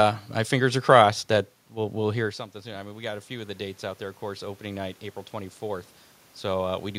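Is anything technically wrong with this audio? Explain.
Yes. From 1.73 s to 5.96 s, just after "fingers are crossed that", there is automatic gain rising. The talker moves back around 2.0 s and the level at the microphone drops by about 16 dB. The automatic gain control reads this as a quiet input and slowly raises its gain by about 8 dB over roughly four seconds. You hear the voice and the room noise swell up together, and only about half of the lost level comes back.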